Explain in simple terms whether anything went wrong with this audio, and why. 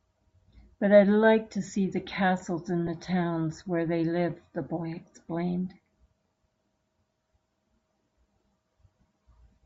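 The speech was squeezed hard for a wireless link, most likely Bluetooth LC3 compression, which throws away upper detail and fills it with noise, giving a grainy, breathy edge throughout. Lost LE Audio frames cause a tiny gap from 2.87 to 2.89 s. The decoder patches it with a noisy copy of the previous sound, consistent with a single dropped frame, leaving a brief smear.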